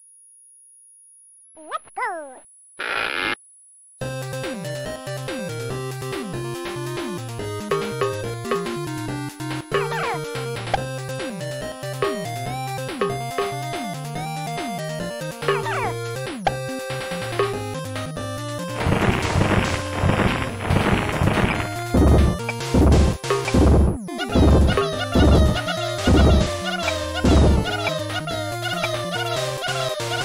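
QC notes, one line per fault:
Throughout: switching supply whistle, a thin high tone wandering between 10.2 and 10.4 kHz, roughly 30 dB below the sound, as a power supply's switching frequency shifts with load. On a spectrogram it appears as a faint, slightly wavering horizontal line near 10 kHz.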